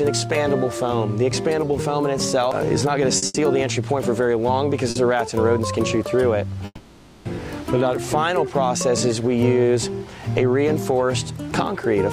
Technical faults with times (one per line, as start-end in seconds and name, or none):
3.17-3.36 short stall from a late packet
4.90-4.97 short stall from a late packet
6.65-7.27 call audio freeze